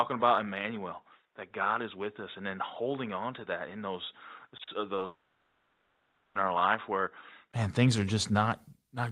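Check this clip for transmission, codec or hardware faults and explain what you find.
Yes, there are three faults, two of them falling inside the span of the first.

From the start to 7.54 s the speech is dull and boxy, with nothing above 3.8 kHz and a slightly lower level. A 20 ms silence follows, then full brightness returns on "man things are". This is likely an input switched to a poorer device, such as a narrowband headset mic, then switched back.

Between 4.57 and 5.03 s there's repeated packet loss, giving a choppy, robotic texture. Four short holes, the longest 40 ms, were each patched by stretching the preceding sound. That covers about a fifth of the stretch, so the holes come back before the speech settles.

From 5.05 to 6.37 s the speech is replaced by a stretched buzz that fades, and it resumes later with that 1.3 s simply gone. This is likely a long network dropout, where the receiver kept extending the last sound the whole time.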